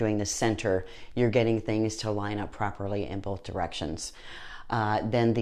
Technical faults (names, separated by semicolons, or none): none